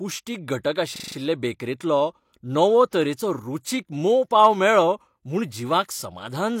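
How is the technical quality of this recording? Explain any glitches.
The speech recording has two glitches: a looping stutter and a brief smear before an attack.

From 0.96 to 1.16 s, one 40 ms fragment repeats exactly five times, giving a rapid stutter at 25 Hz. This is a system hang loop: the system froze while the sound hardware kept replaying the same short ring buffer.

Around 2.90 to 2.93 s, just before "तरेचो रुचीक मोव पांव", a short hiss of about 24 ms runs ahead of a sharp attack, which sounds softened. This is pre-echo: the codec spread quantisation noise across its whole block, including the quiet moment before the onset.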